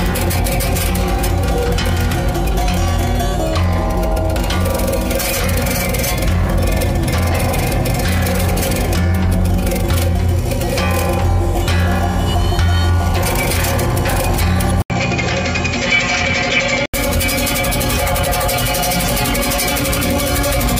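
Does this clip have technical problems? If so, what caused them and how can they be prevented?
Yes. From 14.82 to 16.94 s the sound turns dull and boxy, with nothing above 7.6 kHz, faint new background noise and an 80 ms gap at the switch. This is likely an input switched to a poorer device. Locking the recording to one fixed microphone prevents this.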